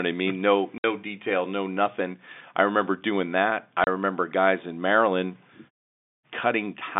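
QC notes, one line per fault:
0.78–0.84 s and 3.84–3.87 s, packet loss filled with silence: the sound drops to dead silence twice, for 60 ms just before "detail no nothing I" and for 30 ms between "remember doing that I" and "guys in". The lengths fit one 30 ms packet lost once and two in a row the first time. The receiver played silence in their place, so the signal is cut abruptly at each edge, with a hard hole instead of a smoothed gap.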